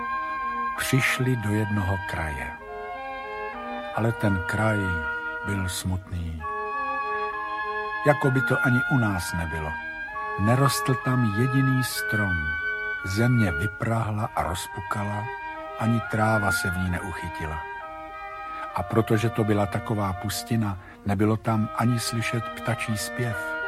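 Nothing technically wrong turns up anywhere in this audio, so there's really nothing to flag here.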